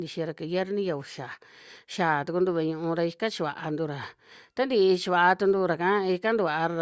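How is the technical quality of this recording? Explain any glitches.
No glitches can be heard in this speech recording. It carries the usual sound of call microphone processing, with the lowest bass trimmed away and nothing above 8 kHz.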